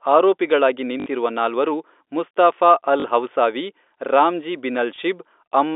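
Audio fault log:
1.0–1.06 s, 3.0–3.04 s, 4.96 s: packet loss with last packet repeated. Lost audio is filled by replaying the previous chunk, giving 60 and 40 ms stutters that buzz at about 50 Hz, which fits 20 ms packets, and a 20 ms blip. They are repeats, not silent gaps, and sit within the narrow telephone-band G.711 sound.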